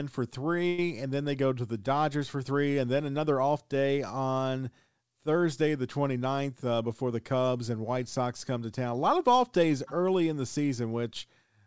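A speech recording sent over a call path whose G.722 coding, at what sounds like 64 kbps, leaves nothing above 8 kHz. Packets were likely delayed and the jitter buffer ran dry from 0.68 to 0.79 s, so the receiver stretched the last sound into a roughly 0.1 s fading buzz or hiss just before "and then they go", with nothing lost, a call audio freeze. Later, from 6.26 to 7.4 s, a jitter buffer speed-up trims the excess backlog by cutting repeated pitch-period slices, about a tenth of a second in all, so the speech runs about 8% faster at unchanged pitch and sounds hurried.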